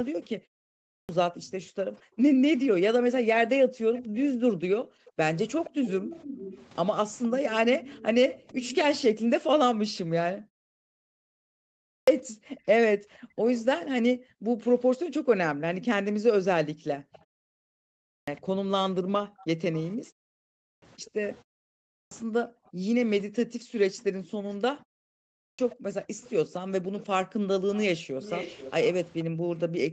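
From 0.35 to 5.81 s, and again from 9.25 s to the end, the background is gated by the echo canceller: room sound sinks by up to about 40 dB, for roughly 3 s in total in the first stretch, while the far-end loudspeaker plays. Unlike a pause fade, the dips follow far-end activity rather than gaps between phrases.

At 0.71 s the first clipped start after a pause appears. The output device had dozed through about 0.3 s of silence and swallowed roughly 0.38 s of onset, so speech begins abruptly. The same happens at 11.73, 17.89, 20.46, 21.73 and 25.22 s, each losing about 0.35 to 0.39 s. The cut always lands at the start of sound after quiet, never mid-phrase.

An echo leak, likely from the loudspeaker side's canceller letting residue through, brings a faint copy of the voice trailing about 0.46 to 0.48 s behind the speech. It is brief and about 25 dB down at 3.95 s, then stronger, about 15 dB down, from 5.64 to 8.84 s. 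It returns from 12.47 to 13.61 s at about 25 dB down, as a tiny trace near 24.50 s at about 35 dB down, and at about 15 dB down from 26.21 to 29.59 s. The fixed delay separates it from reverberation.

From 10.53 to 10.99 s a long network dropout, likely, loses about 0.44 s. A short concealment buzz fades to near-silence, and the audio resumes with the middle missing, not merely delayed.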